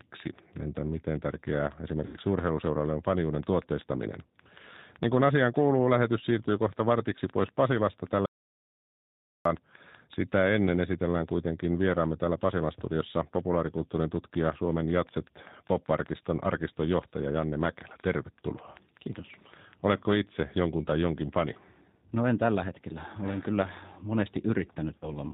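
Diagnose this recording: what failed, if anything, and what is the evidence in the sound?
Codec stage: G.729 coding at 8 kbit/s roughens the speech throughout; a spectrogram shows nothing above 4 kHz and smeared, synthetic-looking harmonics.

Network stage: VoIP packet loss concealed by the speech codec at 2.06–2.17 s and 24.98–25.11 s. The decoder extrapolates fading sound over 80 ms and 40 ms, which fits four and two lost 20 ms packets.

Input or link stage: audio dropout to silence at 8.26–9.45 s, about 1.19 s of flat, silent waveform with no room tone, likely from a briefly lost input or link.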